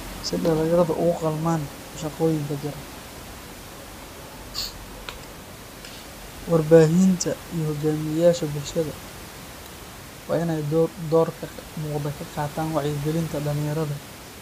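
Speech recording with no technical faults to report.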